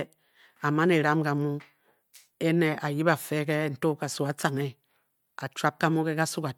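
No faults are audible anywhere in the recording.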